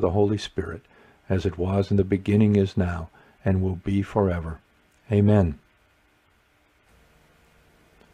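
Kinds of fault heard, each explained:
No technical faults can be heard anywhere in the recording. Nothing in the audio stands out as a defect worth describing.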